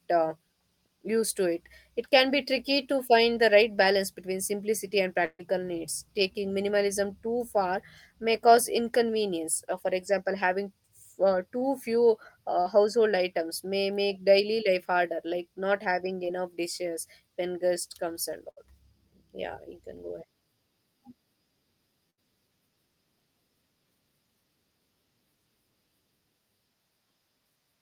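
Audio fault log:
5.25–5.41 s, 18.51–18.58 s, 22.10–22.19 s: burst of packet loss. About 140, 60 and 80 ms go missing; the receiver stretches the last sound into a fading buzz or hiss, the first ending in a brief 30 ms silence before the audio jumps ahead.
11.59–11.63 s, 12.61–12.67 s, 16.25–16.29 s: short concealed packet loss. Gaps of 20 to 40 ms are patched by extending the preceding sound, then blended back, leaving a brief smear or wobble.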